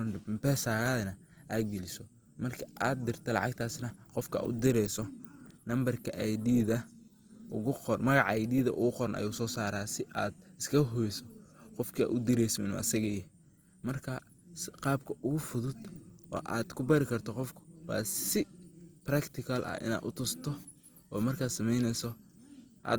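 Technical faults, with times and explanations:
throughout, Opus compression: the speech is grainy and rough, likely from Opus music-mode coding near 24 kbps. The spectrogram shows noise-filled bands with few holes, reaching 20.1 kHz.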